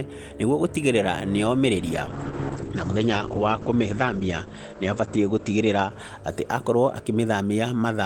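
From 1.76 s onward, a call bitrate drop cuts coding from 40 to 9 kbps and bandwidth to 8 kHz; speech sounds muffled and rough.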